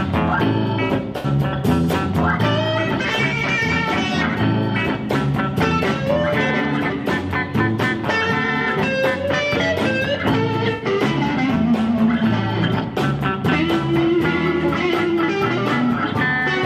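A brief smeared, noisy patch interrupts the sound at 1.18 to 1.26 s, and a second, somewhat longer one at 10.73 to 10.85 s. Both are AAC frame loss with concealment: the decoder lost a short run of frames, about 64 ms at the first point and about 85 ms at the second, consistent with three and four frames, and filled the gap by reusing the last good spectrum, blurring detail there.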